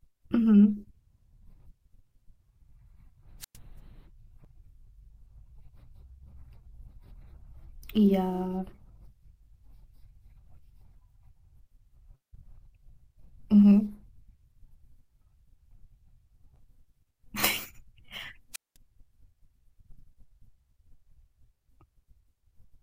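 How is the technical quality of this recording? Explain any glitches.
The recording has two wireless microphone squelch dropouts. At 3.40 to 3.57 s and again at 18.53 to 18.77 s, the radio link fades until the receiver's squelch cuts the output. Hiss rises briefly, then the speech drops into near silence for about 0.11 s and 0.2 s respectively before returning.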